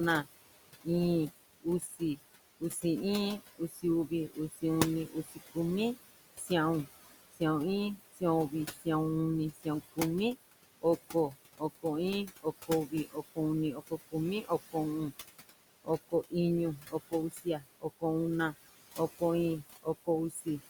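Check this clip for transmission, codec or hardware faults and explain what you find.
The clip shows two related faults, both from a noise suppressor in the chain.

Noise suppressor artifacts run through the whole clip. The room noise sits about 12 dB below the speech. The suppressor pulls it down by about 18 dB. It does this band by band, frame by frame. So the background sinks in the pauses and creeps back under the speech.

Speech cut by the noise suppressor appears in two stretches. The first runs from 0.24 to 18.03 s. The second runs from 18.96 to 20.61 s. Here the suppressor mistakes quiet parts of the speech for noise. It turns them down along with the background. The drops reach about 22 dB in the first stretch and about 20 dB in the second. Across the first, roughly three seconds in total are affected. Across the second, only a fraction of a second is. Soft consonants and word endings sound swallowed or faint.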